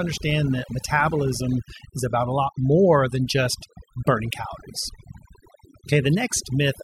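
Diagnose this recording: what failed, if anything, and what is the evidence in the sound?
Overdone noise removal at the processing stage, throughout: the background drops and breaks up into twinkling specks. A spectrogram shows dark gaps sprinkled with isolated dots and holes punched into the weaker speech bands.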